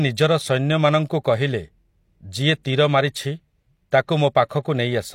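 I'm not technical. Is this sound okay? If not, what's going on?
No. There is a fault called pre-echo, and it happens twice: at about 3.91 s and again at about 4.49 s. Just before a sharp sound starts, you hear a tiny burst of hiss. It lasts only about 11 ms the first time and 15 ms the second. The compression that saved this speech spread its noise across a short stretch. That noise leaked into the quiet moment before each sharp sound, so those starts sound blurred.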